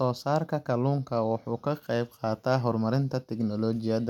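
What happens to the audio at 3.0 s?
Nothing goes wrong at 3.0 s; the speech there plays through intact, with no dropout, click, distortion or other fault.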